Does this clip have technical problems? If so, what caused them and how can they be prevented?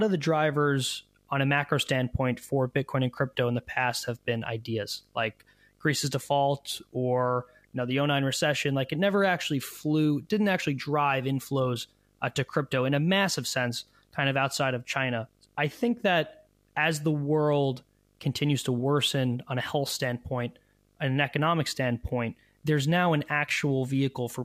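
Yes. There's video or display buzz running under the speech for the whole clip: a 50 Hz buzz with a fizzy hash on top, plus a thin whine up at 15.6 kHz. It's sitting fairly low, well beneath the speech. That combination is a screen or video cable leaking into the audio path, with the 50 Hz matching the picture's field rate and the high tone matching its line scanning. To prevent it, keep video cables and monitors away from audio lines and use balanced, properly grounded connections.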